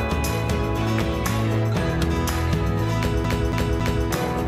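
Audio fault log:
3.25 to 4.08 s, CD stuck on one turn. The same 0.28 s stretch of audio repeats three times, with a brief mute at each jump. A scratch throws the laser back one track on every revolution, giving a fast, even stutter.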